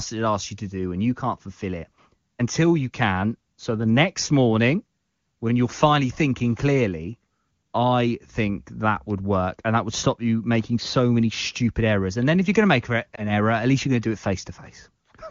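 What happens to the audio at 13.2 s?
A lost AMR speech frame at 13.15 to 13.25 s, just after "going to make an": the decoder rebuilt about 20 ms from the last good parameters at lower gain, leaving a brief dip.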